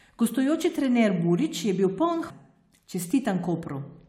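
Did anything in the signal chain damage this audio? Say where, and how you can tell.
Yes. At about 2.29 s the speech jumps abruptly forward with a brief blip, as if a chunk of the programme simply isn't there and the talk resumes from a later point. That's most likely a stream segment skipped at the network or playback stage: one piece of the segmented stream didn't arrive or load in time, so the player gave up on it and carried straight on with the next segment, splicing over the gap.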